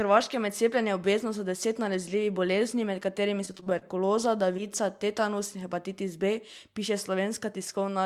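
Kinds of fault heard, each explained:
Repeated packet loss (robotic sound): from 3.45 to 4.12 s, nine short dropouts, longest 21 ms, get patched by stretching earlier sound, leaving a choppy stutter.
Short concealed packet loss: around 4.57 s about 20 ms never arrived; the receiver papered over it, so you get a quick smear before things blend back.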